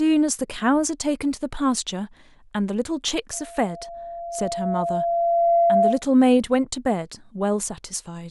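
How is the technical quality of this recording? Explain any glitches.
The recording is marred by one clear fault. From 3.33 to 6.03 s there is loudspeaker feedback squeal: the microphone picked up its own loudspeaker, and at 684 Hz the loop gain rose above one. That tone swells over roughly two seconds into a steady squeal, ending up a few decibels louder than the speech itself.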